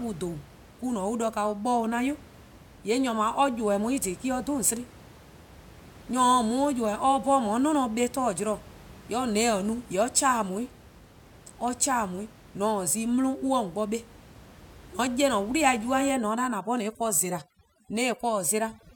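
From 16.12 s to the end at 18.95 s the speech shows overdone noise removal. A noise reduction stage is pulling individual frequency bands down hard wherever they sit close to its noise estimate. The room noise, which up to that point sits about 23 dB below the speech, collapses into near silence dotted with twinkling specks, while the quieter parts of the voice are stripped away. A noise gate would instead shut everything at once, and the specks are what set this apart.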